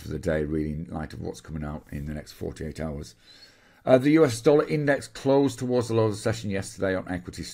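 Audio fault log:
No fault heard: the signal stays continuous and stable throughout, with level, timing and frequency range holding consistent at every point.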